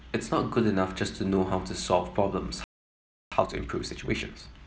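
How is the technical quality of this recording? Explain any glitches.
The speech breaks off partway through and then rushes to catch up.

At 2.64 s there is a playback stall. The output falls silent for about 0.68 s, until 3.32 s. The player likely ran out of buffered data or its thread was blocked. The speech then resumes abruptly.

From 3.32 s to 4.56 s comes time-compressed catch-up. The player trims its backlog by cutting small pieces and cross-fading the joins. Speech runs at about 1.5 times normal speed. Pitch stays natural, but delivery sounds hurried.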